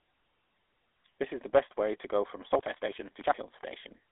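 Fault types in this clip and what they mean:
GSM full-rate codec: The speech was squeezed through the original GSM mobile coder, which the sound suggests ran at about 13 kbit/s. It rebuilds speech from a vocal-tract model excited by an evenly spaced pulse train carrying only a fraction of the original detail. Throughout the clip this gives a plainly audible buzzy, gravelly roughness. The band is narrowed to a telephone line of roughly 300 Hz to 3.5 kHz, with nothing above 3.8 kHz.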